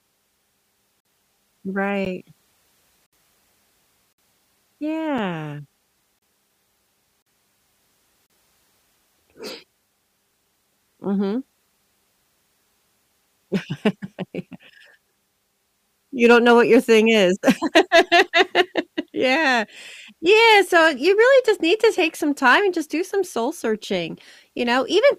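A speech recording with two faults. Gaps between stream segments cut hard-edged silences into the sound once per second, at 1.00–1.05, 2.05, 3.06–3.13, 4.13–4.18, 5.18, 6.19–6.22, 7.22–7.26 and 8.26–8.30 s. These are holes of roughly 4 to 64 ms where the timestamps of consecutive 1 s segments fail to meet and the player pads with silence. Nothing is lost from the audio. Hard clipping then flattens peaks at 16.24–18.61 s (about 4 dB over), 20.33–21.22 s (about 3 dB) and 22.46–22.56 s (about 2 dB). The squared-off tops add high harmonics, heard as crackle on the louder syllables.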